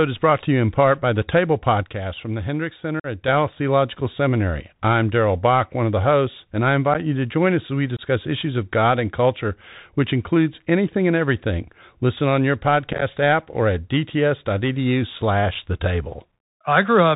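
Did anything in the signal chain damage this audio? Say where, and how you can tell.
Yes. The damage sits in three places: the Bluetooth link's codec, a level step probably in the processing chain, and the wireless link dropping packets.

The whole speech clip has passed through the Bluetooth CVSD headset codec, a 64 kbit/s one-bit delta modulator whose adaptive step cannot follow fast, loud changes. The damage is plainly audible. The band stops at 4 kHz, so the speech sounds narrow and muffled. Sibilants turn scratchy, and a granular hiss rides under everything as the step size hunts up and down.

A sudden gain jump drops the level by about 7 dB at 1.83 s and restores it at 3.28 s. Speech and the background hiss fall and rise together, with no fade at either edge. That points to a gain setting or bit shift applied from one sample to the next. This is likely a driver or call-processing stage switching gain without a ramp.

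Unconcealed Bluetooth headset packet loss punches holes in the audio. Nothing fills them, so their edges are abrupt. The first gap runs from 3.00 to 3.06 s, about 45 ms, roughly ten short voice packets. At 6.94 s, between "the hosts and I" and "you to join us", there is an 11 ms gap. Another lasts about 22 ms at 7.97 to 8.01 s, between "join us as we" and "issues of". From 12.93 to 13.03 s, between "on your" and "app or at", scattered dropouts totalling 56 ms sound like crackle.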